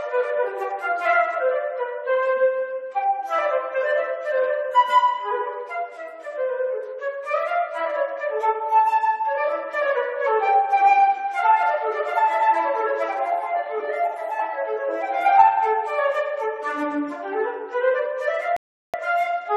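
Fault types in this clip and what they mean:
Rebuffering stall: near the very end, at 18.57 s, the sound drops abruptly into silence for about 0.37 s, then picks up again at 18.94 s at exactly the point where it broke off, with nothing skipped or repeated. That gap is playback time added, not audio removed. It happens when the player exhausts the audio it has already downloaded and has to halt until the next portion of the stream arrives, then carries on seamlessly from where it paused.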